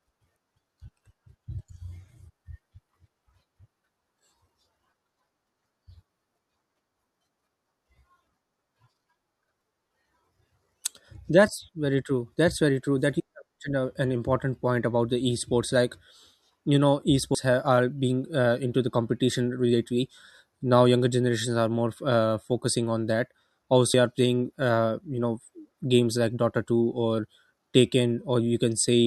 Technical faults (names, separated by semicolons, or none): compressed frames skipped